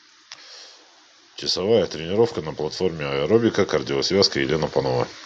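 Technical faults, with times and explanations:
2.98 to 5.16 s, automatic gain rising. From about 2.98 s the level climbs steadily for just over two seconds. It ends roughly 8 dB louder at 5.16 s. The automatic gain control judged the input too quiet and pushed its gain up slowly. Because the gain acts on the whole signal, the speech and the background noise swell together. The slow, even ramp is the sign of a control loop, not the talker.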